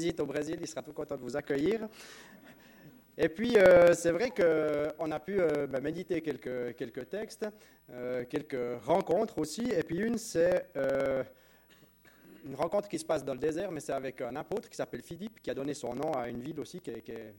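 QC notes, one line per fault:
0.10–17.33 s, periodic USB or driver dropouts: there's a steady tick every 54 ms, so roughly 18 a second, running basically the whole way. Something is blocking the USB bus or audio driver on a fixed cycle, and each time around 10 ms of audio just gets skipped rather than filled with silence. The waveform jumps straight across the gap, which is what gives you that regular clicky texture while sound is playing.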